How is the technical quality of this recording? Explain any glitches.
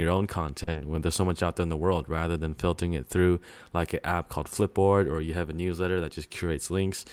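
Two network glitches sit back to back near the start of this speech recording.

From 0.63 to 0.70 s there is a short stall from a late packet. The jitter buffer emptied, so the receiver held the last sound for about 40 ms until the packet arrived, then resumed where it left off. Nothing is lost, but a sound is drawn out with a slight buzz or dip, and playback now runs 40 ms later.

From 0.71 to 0.78 s comes a short concealed packet loss. About 40 ms of audio never arrived, and the receiver synthesised a continuation of the preceding sound before blending back into real audio, leaving a brief smear or wobble where that stretch is gone.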